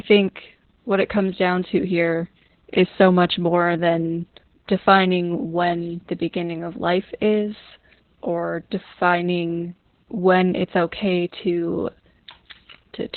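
From start to finish, the speech carries Opus voice compression damage, and it is heavy. Almost nothing reaches above about 4.2 kHz. That points to narrowband mode, which fits a low bitrate near 8 kbps. The coder is working as a linear-prediction voice model in 20 ms frames. With so few bits, the excitation behind each frame is coded crudely. The voice sounds muffled and hoarse. It also takes on a slightly robotic edge.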